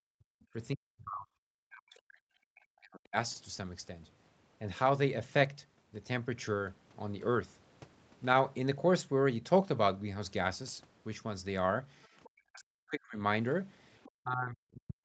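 From 0.0 to 0.59 s, 0.75 to 2.18 s and 2.51 to 3.16 s, the speech drops out in pieces, falling by about 40 dB at its deepest. This is speech suppressed in double talk. The echo canceller likely mistook the talker for echo while both sides spoke, and turned everything down.

At 12.03 to 12.07 s and 12.24 to 12.29 s, the other side's voice leaks through as faint scraps, far below the speech. The canceller likely left some loudspeaker sound in the microphone. From 12.25 to 13.18 s, the speech is suppressed again, with cuts of about 40 dB. At 14.03 to 14.1 s, another short leaked scrap appears, a little louder. From 14.12 s to the end, the speech is suppressed once more, dipping by about 40 dB.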